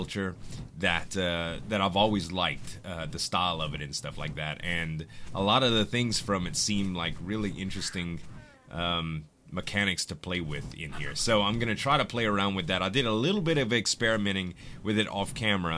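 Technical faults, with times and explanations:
No technical faults are audible anywhere in this audio.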